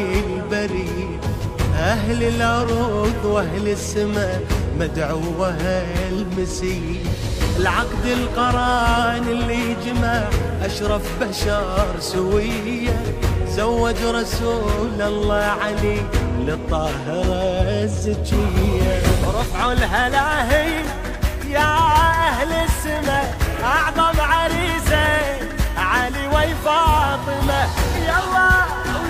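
Nothing in this audio points to a technical fault. No event stands out anywhere in the recording that would need a time or a cause.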